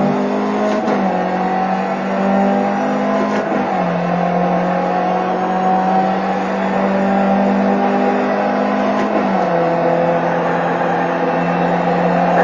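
No technical faults can be heard anywhere in the clip. It has passed through a WebRTC call path, and its high frequencies stop at around 12 kHz, which fits an Opus codec running at a super-wideband call setting of about 40 kbps.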